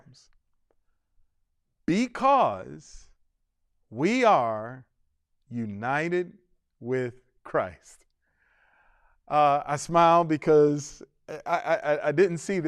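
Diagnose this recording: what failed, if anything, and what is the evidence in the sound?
Nothing failed that I can hear: the speech runs along without any dropouts, clicks, glitches or other marks left by a failing stage anywhere in the chain.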